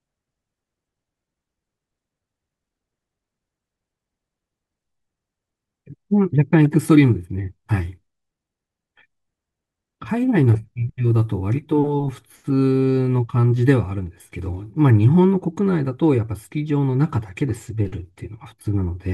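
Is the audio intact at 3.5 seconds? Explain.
Yes, the audio is intact at 3.5 seconds, with no audible fault at that moment.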